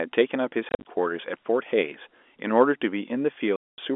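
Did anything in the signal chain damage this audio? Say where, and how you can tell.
Yes, at the network stage: packet loss filled with silence. From 0.69 to 0.83 s, about 110 ms of audio drops out in scattered gaps across roughly 160 ms, the longest gap 40 ms. From 3.56 to 3.78 s, a solid 220 ms hole follows. Each gap has abrupt edges, and the gap sizes fit 10 ms packets. Lost packets were replaced with digital silence rather than concealed. The telephone-band G.711 coding around the gaps is audible but plays no part.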